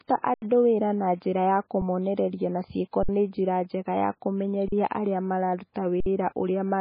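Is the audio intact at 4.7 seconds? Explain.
No. The output buffer ran empty just after "nĩ njĩra njega ya", an underrun with held sample from 4.68 to 4.72 s. The converter froze on its last value for 40 ms, so the waveform goes flat and the sound briefly stops. Since nothing was lost, playback resumes where it stopped, softly rather than with a click.

The sound at that moment also carries heavy damage that likely comes from MP3 compression at a very low rate, which fits about 16 kbps. Nothing remains above 5 kHz, and the missing treble and unstable weak detail give a watery, swirly quality.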